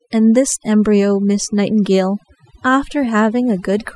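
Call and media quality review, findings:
Overdone noise removal, throughout: background gated to near silence with twinkling specks. Spectrogram shows gaps where bins near the noise floor are zeroed.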